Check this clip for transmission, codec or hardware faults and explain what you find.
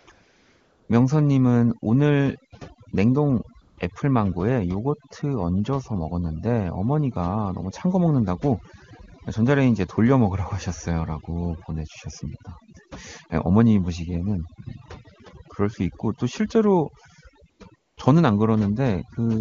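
Two faults are audible in this speech clip: heavy-handed noise reduction across the whole recording, and five short stretches of AMR comfort noise. The AMR wideband (HD Voice) coding itself leaves at most faint traces, which fits one of the codec's higher bitrates.

Overdone noise removal, throughout: a noise suppressor set too aggressively pulls individual frequency bands down or out wherever they sit near its noise estimate, taking quiet parts of the voice with them. The background drops and breaks up into twinkling specks.

AMR comfort noise, at 0.0 to 0.07 s, 0.11 to 0.89 s, 3.61 to 3.77 s, 17.49 to 17.59 s and 17.75 to 17.97 s: the phone treated these moments as silence and stopped sending speech frames. The receiver filled each gap with synthetic noise built from a coarse level and spectrum description, so a smooth, steady hiss switches in and out in place of the real background.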